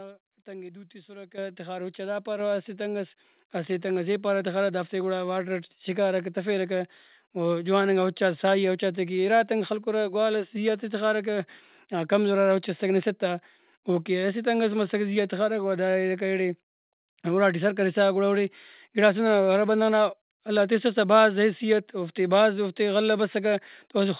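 The speech jumps up in level three times as the microphone volume is stepped up, at 1.38 s by about 9 dB, 2.4 s by about 4 dB and 3.42 s by about 2 dB. Voice and background rise together, because the input gain changed in steps. The band stops at 4 kHz, consistent with G.711 on the call path.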